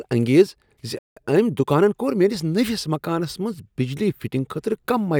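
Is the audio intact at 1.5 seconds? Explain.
No. At 1.5 seconds the audio sits inside a time-compressed catch-up running from about 1.17 to 2.35 s, just before "نٔوس مکانس منٛز بجلی". After a stall, the player trims its backlog by removing short slices and cross-fading the joins, so the speech plays about 1.15 times faster at unchanged pitch, sounding hurried. On a spectrogram, harmonics keep their spacing while syllables squeeze closer, and the waveform shows small seams where pieces were spliced.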